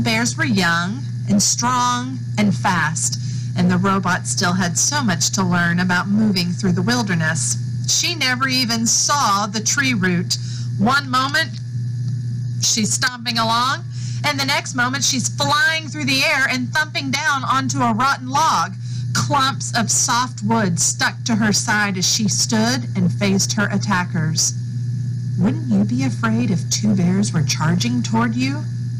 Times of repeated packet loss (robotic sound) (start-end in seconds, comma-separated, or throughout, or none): none